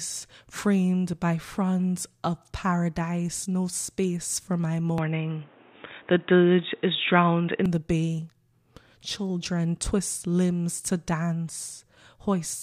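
From 4.98 to 7.66 s the speech turns dull and boxy, with nothing above 3.8 kHz, a small level shift and faint new background noise, likely an input switched to a poorer device.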